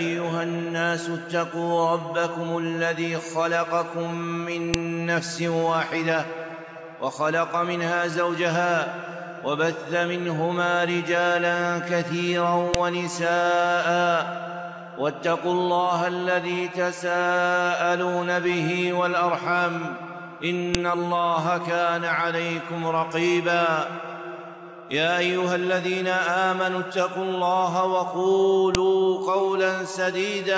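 At 4.74, 12.74, 20.75 and 28.75 seconds you get a sharp, loud click, each one over in a couple of milliseconds, and they land exactly 8 seconds apart no matter what the sound is doing. That's a file header played as audio: the clip was stitched together from 8-second WAV pieces, and each piece's header bytes got left in and played back as samples, so every join snaps.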